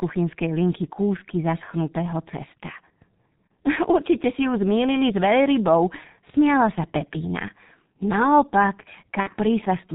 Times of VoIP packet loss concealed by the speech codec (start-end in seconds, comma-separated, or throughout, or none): 3.48, 9.20-9.29